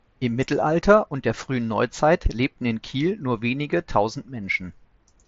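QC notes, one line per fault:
No faults found; speech arrives over an mSBC Bluetooth headset link, with nothing above about 7.7 kHz and the light graininess that codec leaves on louder sounds.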